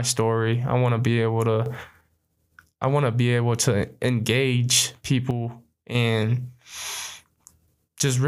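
After "want to be able", a sudden gain jump lifts the sound and background noise together by about 7 dB from 1.66 to 2.01 s. After "be able to engage", the level falls about 6 dB from 5.31 to 5.95 s. Likely unramped gain changes, seen as square envelope steps and full-band spectrogram shifts.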